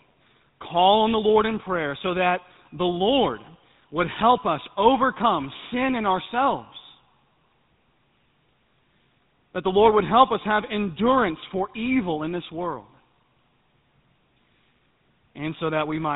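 From start to finish the speech carries the signature of the GSM full-rate codec. Nothing reaches above about 3.8 kHz, and the damage is plainly audible: a buzzy, gravelly roughness rides on the voice because the codec rebuilds it from a vocal-tract model driven by a sparse, regularly spaced pulse train, which fits a 13 kbps stream. Simple band-limiting would only sound muffled; this grainy buzz is what marks the codec.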